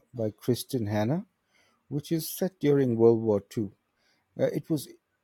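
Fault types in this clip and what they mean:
No technical faults can be heard anywhere in the speech. Nothing in the recording calls for a fault entry.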